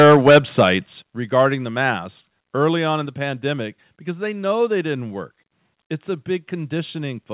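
From 0.0 to 0.69 s the speech has flattened, crackling peaks, likely microphone overload: the input drives about 8 dB past the converter's limit and roughly a tenth of samples are cut off. At 1.02 s speech and background drop together by 9 dB in a single step, likely the microphone volume stepped down by the call software after that distortion. From 1.37 to 1.42 s a shorter, milder crackle appears, likely microphone overload again, with peaks about 1 dB over the limit and a small share of samples clipped. At 3.06 s the level steps down once more by 2 dB, likely a second microphone volume step. The call path limits the whole clip to a narrow band with nothing above 4 kHz, consistent with G.711 mu-law at 64 kbps.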